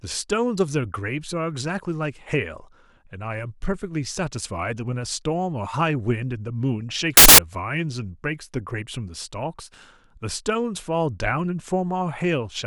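Samples built from the wrong bytes, from 7.17 to 7.38 s: for about 0.21 s the speech gives way to a burst of loud, harsh broadband noise. Each sample in that stretch has been assembled from misaligned or reordered bytes, so the rapidly fluctuating low-order bits land in the most significant position. The waveform becomes essentially random at high amplitude.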